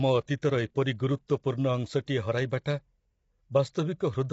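Throughout the speech, low-delay AAC compression damage is plainly audible. The voice sounds rough and grainy, with noise between the harmonics, likely from AAC-ELD at a low bitrate near 24 kbps. A spectrogram shows blurred, noisy harmonic bands and nothing above 7.7 kHz.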